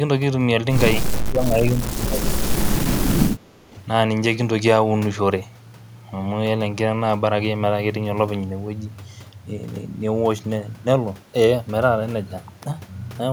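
From 0.97 to 2.81 s the speech sinks sharply, by around 25 dB at its deepest. A second, milder dip follows from 3.3 to 3.77 s, at roughly 10 dB. This is likely speech suppressed in double talk. Both ends were talking at once. The echo canceller could not tell this talker from returning loudspeaker echo. So it turned the near side down along with it.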